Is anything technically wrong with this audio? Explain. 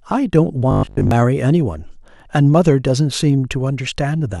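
Yes. From 0.71 to 1.11 s the speech turns into a rigid, metallic 50 Hz buzz. This is robotic sound, likely from repeated short buffers, with a 20 ms slice looping through most of that stretch.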